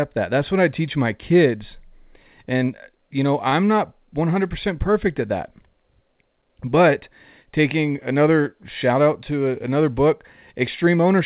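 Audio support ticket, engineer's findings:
Short stall from a late packet at 3.50–3.55 s, right after "you know". The sound is held about 23 ms too long, with a slight buzz or dip, then resumes where it left off with nothing dropped. The jitter buffer ran dry and the receiver stretched the last audio until the packet arrived, adding 23 ms of delay. The call path's 4 kHz band limit is audible throughout, consistent with a G.711 mu-law link.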